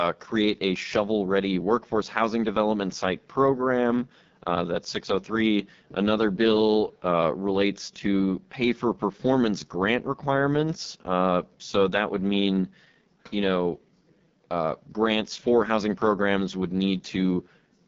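AMR wideband (HD Voice) codec runs throughout: rough, raspy speech with nothing above 7.5 kHz, fitting the coarse pulse-driven modelling of its lowest 6.6 kbit/s mode.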